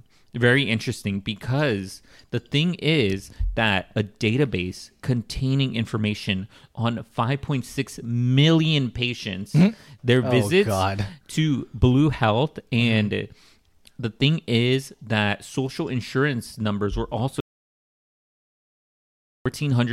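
An audio dropout to silence runs from 17.40 s to 19.46 s in this speech recording, starting just after "social insurance numbers were". For about 2.05 s the signal falls to silence, with no room tone underneath, and then speech resumes mid-flow. Whatever was said in that stretch is gone. The likely cause is a momentary loss of the input, such as a dropped connection or brief mute, while the recorder kept writing empty samples.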